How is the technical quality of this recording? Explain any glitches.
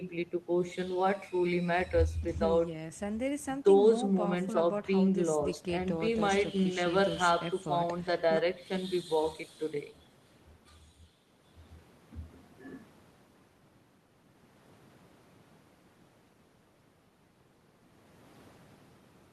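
The recording has no technical glitches to explain. At no point in the speech can a fault be heard, so there is nothing further to describe.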